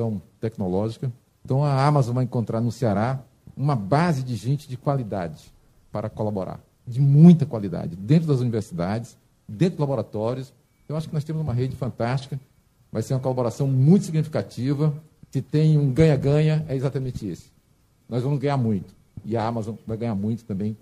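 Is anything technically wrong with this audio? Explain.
No, the signal shows no technical faults that a listener can pick out.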